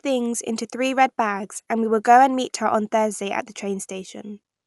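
Speech, with plainly audible Dolby Digital compression throughout. Nothing is present above about 11.4 kHz, so the top of the band is gone and the sound is dull. The coarse texture around voiced sounds fits a low-bitrate AC-3 encode, around 64 kbps, as the likely cause. At that rate the encoder narrows the bandwidth and leaves many frequency lines without mantissa data. The decoder then fills them with dither noise, which leaves a rough, fluttering grain around tonal parts of the speech.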